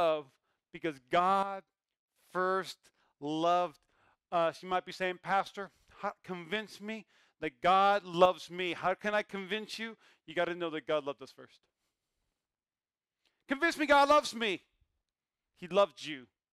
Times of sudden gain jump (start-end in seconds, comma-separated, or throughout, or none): 1.43-2.16, 8.14-8.25